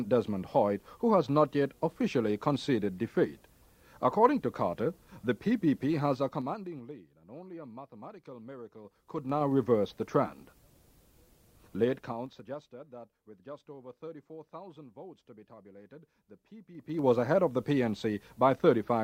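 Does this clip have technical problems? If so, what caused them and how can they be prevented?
Yes. Zipper noise ticks during level moves at 6.1–6.9 s, 8.8–9.5 s, 11.8–12.8 s and 16.7–17.1 s. The gain jumps in unsmoothed 3 dB steps, each clicking. Ramp gain changes smoothly, sample by sample.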